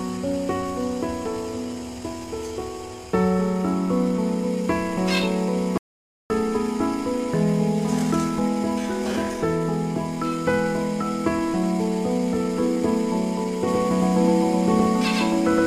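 The sound cuts out at 5.78 s and returns at 6.30 s, losing about half a second. This is an audio dropout to silence. The gap is dead silent, with no room tone. The likely cause is a lost input, such as a disconnected device, a failed link or a stray mute, while recording carried on. From 13.68 s to the end, a doubled audio track appears. A second, full-band copy trails the original by about a tenth of a second, at roughly the same level. It has no decay or room colour, and it begins abruptly. The likely cause is a second capture through a slower path, or an edit that holds two copies out of step.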